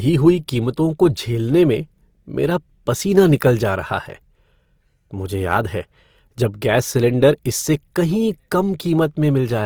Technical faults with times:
0.00-9.66 Opus compression

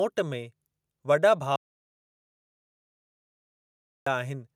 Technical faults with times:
1.56-4.06 audio dropout to silence

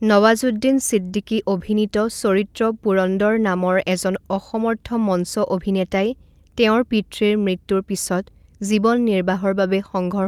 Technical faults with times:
0.00-10.27 clock drift between sender and receiver
0.04-10.21 repeated timing corrections

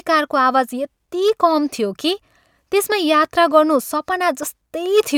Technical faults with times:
none

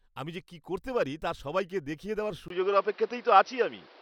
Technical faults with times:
2.48-4.02 input switched to a poorer device

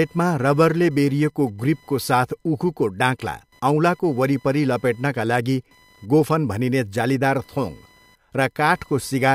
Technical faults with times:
0.00-9.35 computer activity noise

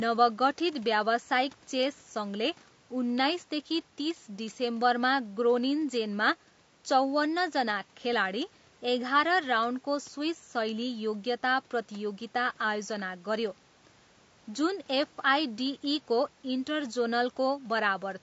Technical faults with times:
0.00-18.23 low-delay AAC compression

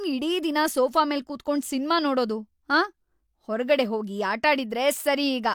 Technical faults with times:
none

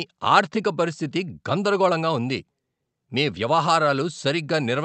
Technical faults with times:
none

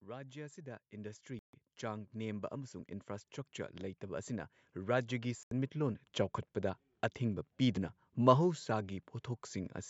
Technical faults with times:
0.05-2.83 automatic gain rising
1.39-1.53 Bluetooth dropout
3.80-6.04 automatic gain rising
5.43-5.51 Bluetooth dropout
6.38 dropped buffer (overrun)
7.77 dropped buffer (overrun)

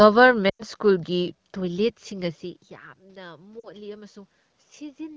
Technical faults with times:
0.49-0.62 lost AMR speech frames
2.98-4.23 automatic gain rising
3.60-3.71 lost AMR speech frames

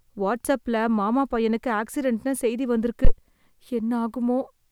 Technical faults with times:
3.05-3.11 phantom power thump

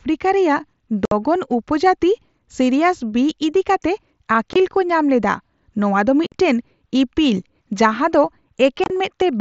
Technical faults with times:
1.05-1.12 unconcealed Bluetooth headset packet loss
4.53-4.56 unconcealed Bluetooth headset packet loss
6.27-6.32 unconcealed Bluetooth headset packet loss
8.84-8.90 unconcealed Bluetooth headset packet loss

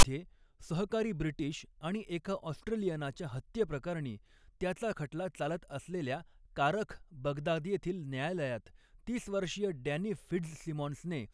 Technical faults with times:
0.00-0.03 file tags played as audio

